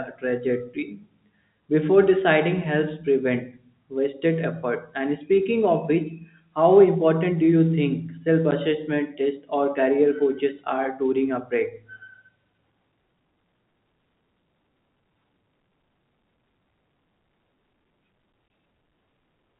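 At 8.51 s the speech drops out for 10 ms. From 18.48 to 18.50 s it drops out for 20 ms. Both are packet loss filled with silence. Lost packets played as nothing. The gap lengths fit whole 10 ms packets. Each hole has hard edges.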